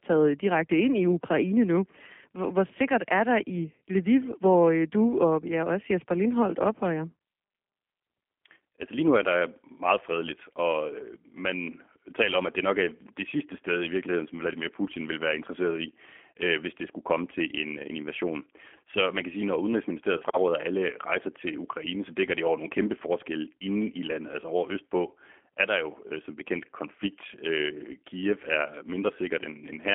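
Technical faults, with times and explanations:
throughout G.729 codec: speech is rebuilt from a vocal tract model, pitch predictor and sparse pulses per frame, so it sounds rough and synthetic, with nothing above 3.7 kHz. That roughness, fitting an 8 kbit/s coder, sets it apart from a clean 200 Hz to 3.4 kHz telephone filter.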